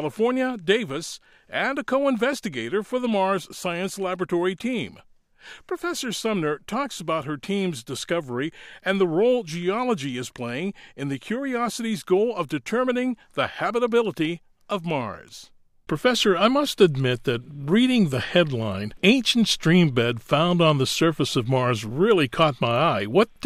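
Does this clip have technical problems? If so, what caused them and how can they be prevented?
No, there's nothing technical going wrong anywhere in this clip, so there's nothing that needs fixing or guarding against.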